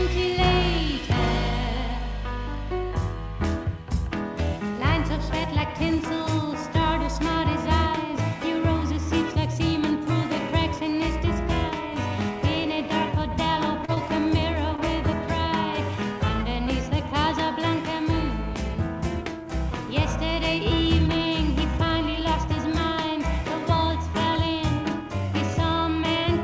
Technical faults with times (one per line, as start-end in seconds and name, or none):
13.85-13.98 short concealed packet loss
14.76-14.80 short stall from a late packet